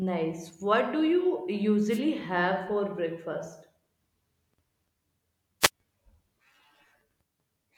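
A short swish of static cuts through the speech at 1.89 to 2.00 s, just after "do you" and before "have for breakfast", and a second, slightly briefer burst follows at 5.61 to 5.70 s. Both are wireless microphone noise hits: the FM radio link from the microphone momentarily fades as reflected signals cancel, so receiver noise rises over the voice for about a tenth of a second each time.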